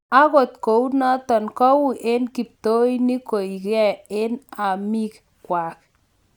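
A speech recording with nothing technically wrong with it.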